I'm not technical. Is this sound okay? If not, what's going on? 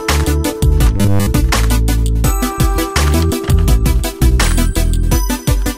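No. Robotic sound from repeated short buffers appears from 0.97 to 1.28 s: the sound becomes a flat, metallic buzz at 100 Hz. The likely cause is audio arriving too late, so the playback repeats one 10 ms slice over and over.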